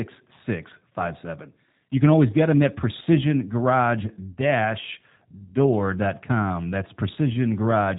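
From start to finish the speech sounds rough and slightly synthetic, with nothing above 3.8 kHz. This is plainly audible G.729 codec damage, consistent with an 8 kbit/s G.729A stream rebuilding each frame from a vocal tract filter, a pitch predictor and a few pulses.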